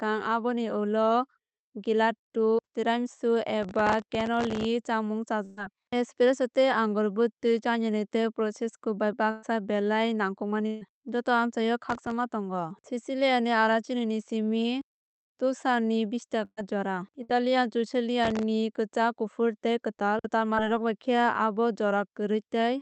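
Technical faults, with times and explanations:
3.63–4.65 s, 11.89–12.11 s and 18.24–18.43 s, processor overload crackle: each stretch is a gritty, tearing crackle laid over the sound, longest in the first second-long burst and shorter later, stopping each time. The processor fell behind on very small buffers of roughly a millisecond or two and missed roughly 15 to 50 deadlines in a row. Each miss replayed a scrap of old audio with hard edges, and the rapid string of those splices is heard as crackle.
5.45–5.59 s, 9.31–9.45 s, 10.67–10.83 s, 16.45–16.59 s and 17.23–17.31 s, burst of packet loss: the sound briefly freezes into a held tone or hiss that fades, then picks up again slightly further along with a piece gone. About 120 ms was lost in most of these, 140 ms at 10.67 s and 60 ms at 17.23 s. The receiver extended the last audio and turned it down. At 16.45 s the fill ran out into a short silent gap before playback resumed.
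20.55–20.59 s, short concealed packet loss: a quick smear or wobble, over almost before it registers. Roughly 20 ms of audio arrived too late to play. The receiver covered the hole by continuing the previous sound and then blended back into the real signal, so the splice is brief and soft-edged. Any very short sound falling in that gap would disappear with it.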